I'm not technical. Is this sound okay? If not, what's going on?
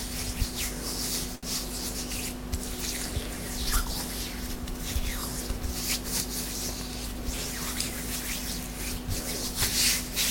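No, it has two small glitches.

A short stall from a late packet happens at 1.35 to 1.45 seconds. The audio travels in small chunks, and one arrived late. Rather than leave a gap, the player stretched the last bit of sound for about 73 milliseconds until the chunk turned up, then carried on from the same spot. Nothing is lost, but that moment hangs on slightly too long and may buzz or dip briefly.

A jitter buffer speed-up follows from 6.92 to 8.07 seconds. The player had built up more waiting audio than it likes, so it caught up by snipping out many tiny slivers in quick succession, about a twentieth of a second in total. For that stretch the sound plays around 5 percent faster without any change in pitch, so it feels a little rushed.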